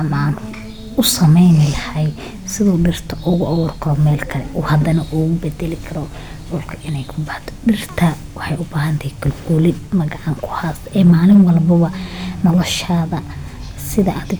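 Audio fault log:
11.02–11.72 s and 13.99 s: hard clipping. Speech peaks exceed the stage's limit by about 3 dB, then about 2 dB, so their tops are cut flat, adding high harmonics heard as crackle.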